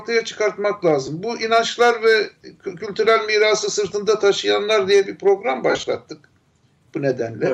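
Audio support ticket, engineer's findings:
Lost LE Audio frames at 1.07 s: a brief noisy smear, about one 7.5 ms frame. LC3 decoder concealed the gap by repeating the last spectrum with random signs. Repeat at 5.70–5.87 s: dropouts scattered over 165 ms, longest run roughly 50 ms. Smear fades toward silence.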